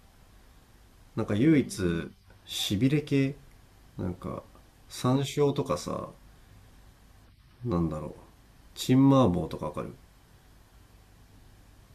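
No technical faults can be heard anywhere in the recording; the speech signal stays steady and intact with no breaks, level jumps or added disturbances at any point.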